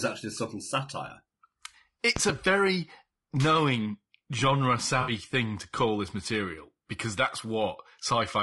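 Speech clip with a rough, grainy quality throughout: the harmonics of the voice are poorly resolved, noise fills the gaps between them, and the top band sounds thin and partly synthetic. This is low-delay AAC compression, likely AAC-ELD. Its short low-delay frames give the coder too little frequency resolution to separate pitch harmonics cleanly. At the low rate the damage suggests, around 32 kbps, there are not enough bits to hide the quantisation noise, so the codec damage is plainly audible. From 2.16 to 2.32 s, just before "very knowing genre", a loud pop lands on top of the speech as two sharp clicks in quick succession, some 15 dB above the voice, while the speech carries on underneath. That sound points to a sudden voltage step or pulse entering the chain, such as a plug, switch, static discharge or driver glitch, with the following circuitry shaping each pulse into a brief thump. 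Between 5.01 and 5.11 s, after "very knowing genre" and before "thing to call this", there is a short smeared, noisy patch. This is AAC frame loss with concealment. The decoder lost data, which fits about three frames or 60 ms of audio, and filled the gap by extrapolating from the last good spectrum. The patched-in section therefore sounds washy rather than dropping to silence.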